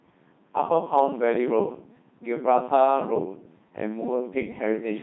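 Speech, and the whole thing has been through the Codec 2 vocoder, with heavy damage from start to finish. It has that unmistakable robotic, buzzy quality because the decoder isn't rebuilding the original waveform at all. It's resynthesising the voice from sine waves, driven only by pitch, voicing, energy and a rough spectral envelope. The amount of smearing fits a very low rate, around 2.4 kbit/s, typical of digital radio links.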